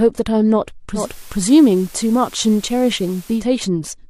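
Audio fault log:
0.93–3.46 s, digital radio blending to analogue: The receiver loses its digital stream and cross-fades to the FM broadcast of the same station, then fades back at 3.46 s. Each blend takes about 156 ms, so the switch is smooth rather than abrupt. During the FM stretch a steady hiss sits under the speech, roughly 25 dB down. The level shifts by about 1 dB because the analogue path is set slightly differently from the digital one.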